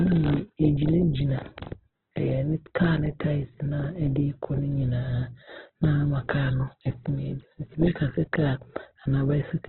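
A speech recording that sounds boxed-in and grainy from start to finish, with nothing above 4.1 kHz and a rough, noisy texture on sustained tones. The likely cause is heavy Opus compression in its CELT music mode, at a narrowband rate that fits roughly 8 kbps.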